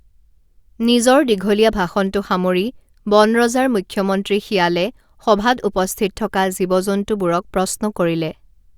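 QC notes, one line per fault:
No faults found in this speech recording on review.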